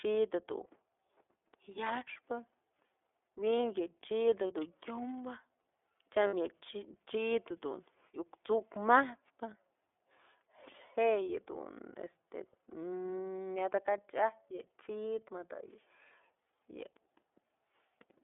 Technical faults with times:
0.00-18.23 iLBC codec
4.47-4.51 lost iLBC frames
6.27-6.34 lost iLBC frames

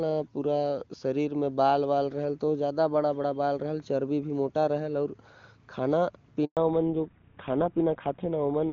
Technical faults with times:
6.45-6.57 handover gap
6.57-8.72 fallback to narrowband

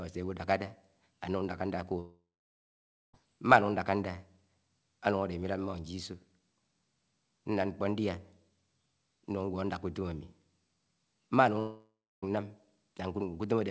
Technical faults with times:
2.00-3.15 long network dropout
11.59-12.24 long network dropout

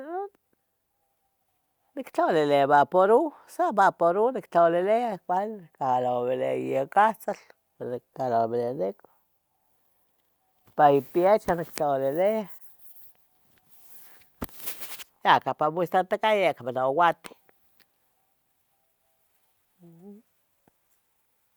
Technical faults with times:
none

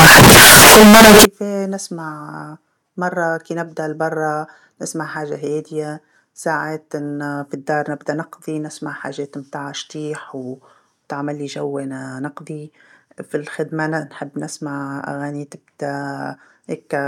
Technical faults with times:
0.00-1.25 float read as integer

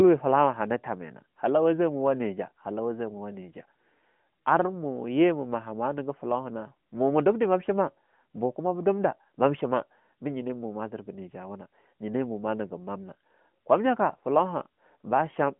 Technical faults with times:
none

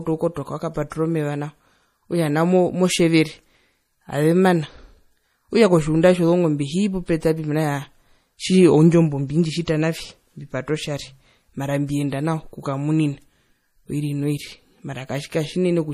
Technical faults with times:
0.00-15.94 MP3 compression

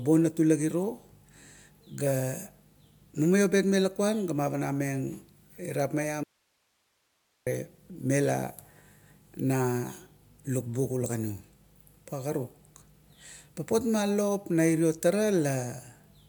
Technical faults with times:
6.23-7.47 audio dropout to a faint residue

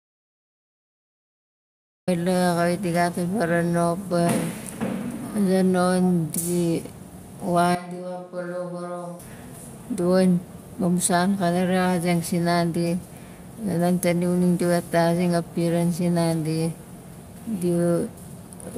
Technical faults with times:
0.00-2.08 audio dropout to silence
7.75-9.19 switch to a distant microphone

